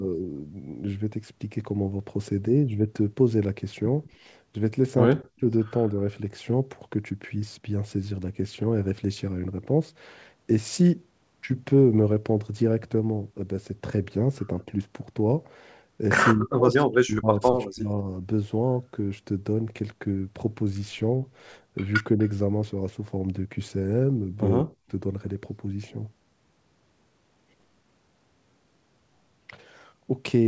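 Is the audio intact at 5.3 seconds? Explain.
No, not at 5.3 seconds. Between 5.23 and 5.43 s the speech dips sharply, by about 40 dB at its deepest, for around 150 ms in total. That's most likely speech suppressed in double talk: the echo canceller couldn't tell the near talker from loudspeaker echo and turned it down.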